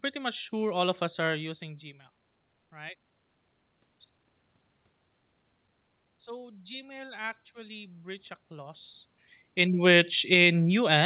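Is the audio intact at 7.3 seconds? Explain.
No. At 7.3 seconds the automatic gain control is part way through raising its gain, a rise of about 6 dB from 6.24 to 8.92 s after it judged the input too quiet. The speech and the room noise swell upward together.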